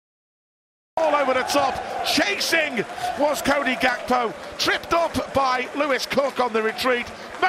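The first 0.97 s is dead digital silence, then the sound jumps in mid-flow with no attack. It's a cut-off start: capture or streaming kicked in late.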